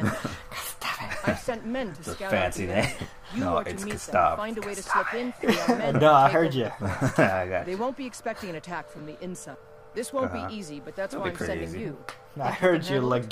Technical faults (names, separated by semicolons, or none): none